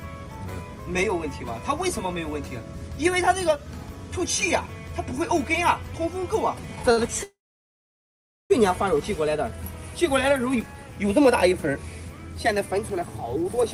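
At 6.92 s a packet reaches the receiver late and the jitter buffer runs dry for a moment. The receiver covers the hole by extending the last bit of sound for about 56 ms, until 6.99 s, then carries on from exactly where it left off. This short stall from a late packet drops nothing. You hear a brief, slightly buzzy holding of the sound, so everything after it lands about 56 ms later.

From 7.23 s to 8.52 s comes a call audio freeze, likely caused by packets held up in transit that emptied the jitter buffer for much longer. The receiver first continues the last sound as a fading buzz, and for about 1.15 s of the roughly 1.27 s fill there is only silence. When the packets finally arrive the audio resumes at the same point. Nothing is skipped, but a pause of well over a second has been inserted and the delay has grown by the same amount.

Between 13.36 s and 13.63 s the jitter buffer speed-up kicks in. 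The buffer holds more audio than its target, so the receiver trims it back by cutting out a run of short pitch-period-sized slices, around 70 ms in total. The sound plays about 20% faster at an unchanged pitch, giving that last quarter-second a rushed pace.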